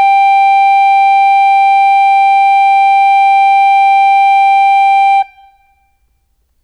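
A piece of music where the opening stretch, from the start to about 4.54 s, plays back slowed to roughly two-thirds speed (0.66x) while the pitch holds steady. So it's a time-stretched section, likely from software padding that passage out to fill a longer slot by repeating short slices. That's why it drags, and the pace jumps back abruptly once the stretch ends at 4.54 s.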